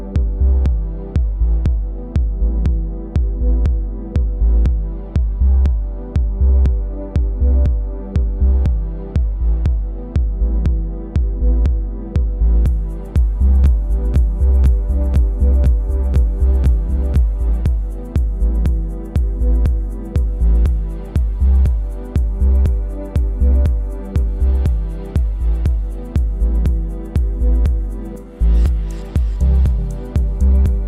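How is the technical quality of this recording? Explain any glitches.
The recording has one clear glitch, a doubled audio track from 13.17 s to 17.61 s. The likely cause is the same signal being captured a second time through a slower path, so two copies end up mixed together out of step. A second full-band copy trails the original by about 1.5 s at roughly 5 dB quieter, with no decay or room colour. It cuts in and drops out abruptly, making the sound overlap itself.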